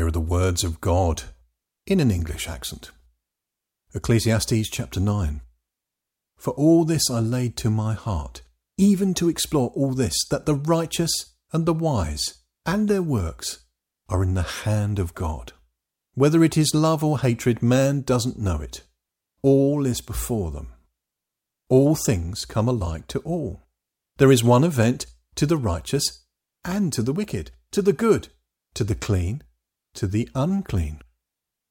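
Nothing in the signal departs from a normal, intact recording of speech, with no technical faults to be heard at any point.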